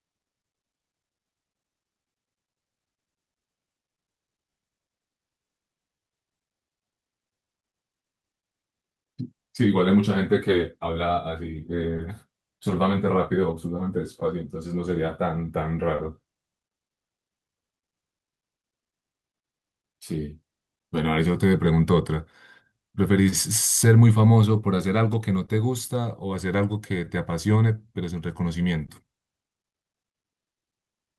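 Speech with clock drift between sender and receiver running through the whole recording: the sender's clock runs roughly 1.5 percent slow, so the receiver's jitter buffer keeps draining, and the receiver has to pad the stream to keep playing. On a waveform this shows up as small, irregularly spaced seams rather than one obvious break. From 1.20 to 10.94 s, repeated timing corrections stretch the audio to 99 percent speed, adding something like 150 ms in small inserted pieces. These are heard as a faintly dragging, unsteady tempo, and a spectrogram shows slightly elongated harmonics with occasional duplicated slices. Between 11.97 and 23.34 s there are scattered short gaps, around ten of them, each patched by continuing the preceding sound. Roughly 150 ms in total is filled and the longest patch is about 30 ms, so nothing is lost, but there are brief ticks and smears. These appear on a spectrogram as short frozen vertical bands. 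Each short stall from a late packet, at 25.46, 27.04, 28.86 and 30.42 s, holds the current sound for an extra 20 ms. This gives a tiny buzzy hold or dip, visible as a flat, repeated stretch of waveform cycles and a brief horizontal smear of steady harmonics.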